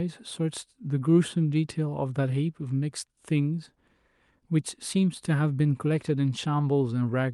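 Speech recording with no audible technical faults anywhere in the clip.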